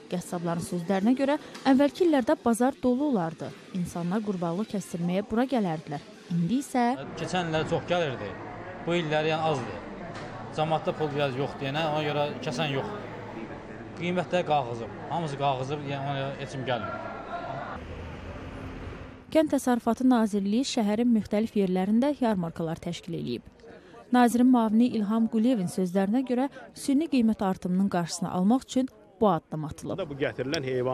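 From 10.84 to 13.40 s the audio takes on a hiss-like roughness about 40 dB below the signal. This is sample clock jitter: timing wobble of roughly a microsecond or two causes errors that grow with the waveform's slope.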